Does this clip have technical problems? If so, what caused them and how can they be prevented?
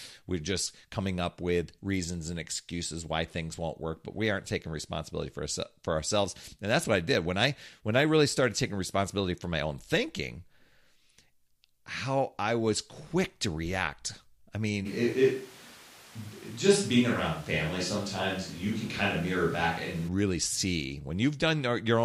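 Yes. From 14.87 s to 20.07 s the speech suddenly turns roomy and hollow, with less bass. It snaps back just as abruptly at 20.07 s. The loudness stays about the same, but background noise rises to roughly 25 dB below the speech. This is the sound of a switch to a distant microphone, likely because the close mic's signal dropped out and a farther one, such as a camera mic, was used instead. To prevent it, monitor the close mic throughout and check its connection and battery before recording.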